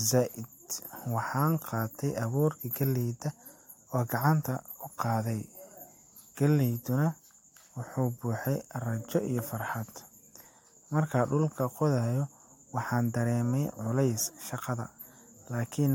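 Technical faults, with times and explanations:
Nothing stood out as a technical fault on listening to this speech recording.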